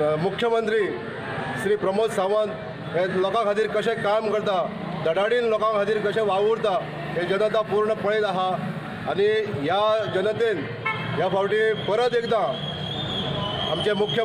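Nothing technically wrong turns up anywhere in this audio, so there's no fault to point at or time to pin down.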